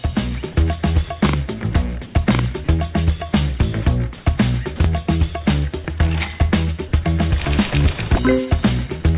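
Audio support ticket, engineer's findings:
Comfort noise in place of the background, 2.06–2.14 s and 4.18–4.26 s, 80 ms each. Real background (about 25 and 28 dB below loud parts) swapped for flat, featureless hiss, level shifted about 1 and 2 dB. Spectrogram: smooth uniform patch, texture gone. Likely DTX comfort noise generation at receiver.

Sound dropped by the voice detector, 2.64–2.68 s and 4.76–4.80 s, 40 ms of sound lost each time. Waveform: sound envelope cut abruptly to low steady noise, then resumes. Spectrogram: the sound's detail gives way to smooth noise band. Likely sender VAD misclassifying quiet sound, within a 4 kHz-limited path consistent with G.711.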